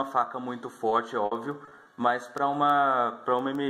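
From about 0.89 to 1.99 s the audio goes choppy and robotic, which is repeated packet loss. Seven holes land in that stretch, the longest around 60 ms, and each gets papered over by stretching the last bit of sound, about 180 ms of fill in total, roughly 16% of that window. Then at 2.38 s there's a sharp snap sitting on top of the audio, most likely an electrical switching spike from something nearby, like a switch or a static discharge, getting picked up on the line.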